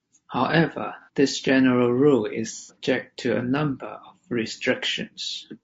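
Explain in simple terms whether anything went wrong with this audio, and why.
Throughout the clip, the speech sounds rough and grainy, with a hiss between the tones of the voice and a thin, artificial top end. That is the mark of low-delay AAC compression, likely squeezed hard for a video call. Unlike background noise, the graininess follows the voice itself.

Twice the sound briefly smears into a noisy, phasey blur: at 1.01 to 1.09 s, and for longer at 2.57 to 2.76 s. This is AAC frame loss with concealment. Small pieces of the signal went missing, and the decoder patched them with a guess built from what came just before. That is why these patches sound smudged rather than falling to clean silence or clicking like a dropout.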